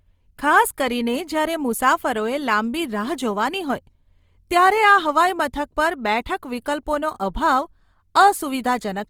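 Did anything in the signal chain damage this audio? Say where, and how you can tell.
Yes, at the codec stage, throughout the speech. The roughness and graininess are plainly audible, and the spectrum still reaches about 20.3 kHz, so the bandwidth has not narrowed. The damage is most likely Opus compression in its CELT music mode, at a rate that fits about 24 kbps. Short of bits, the encoder keeps each band's energy but fills detail by folding or with noise. That leaves a grainy texture rather than the swirling spectral holes of MP3.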